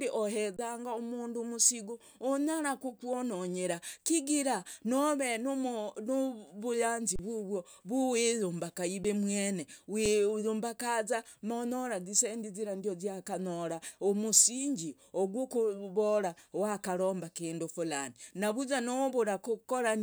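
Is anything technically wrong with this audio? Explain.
Yes. There are four underruns with held sample: at 0.57 to 0.59 s before "mundu umusigo unyara kukwononyera", at 7.16 to 7.19 s between "nove nuvuyanzi" and "vuvwo vwiyumbaka", at 9.04 s after "nove nuvuyanzi vuvwo vwiyumbaka", and at 10.06 s. Each time the output buffer runs dry and the converter freezes on its last sample. Two of the gaps are 512 and 1024 samples long. Unlike a dropout to silence, the speech cuts off with little or no click onto a flat level. Roughly 3 to 30 ms of audio is lost during each gap.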